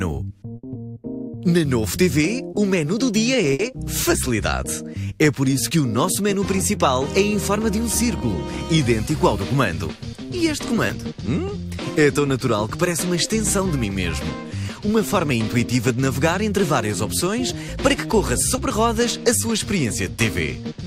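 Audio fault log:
0.55–0.65 s and 3.53–3.61 s: burst of packet loss. Consecutive packets arrived too late or not at all, so the receiver stretched the last sound for 80 ms and then 60 ms, fading it as the gap ran on. The audio then picks up further ahead, with that stretch skipped.
10.87–10.91 s and 18.55–18.59 s: short concealed packet loss. About 20 ms failed to reach the decoder in time. The receiver extrapolated from the preceding sound and crossfaded back into the real signal, leaving a brief smear or wobble where the original detail is lost.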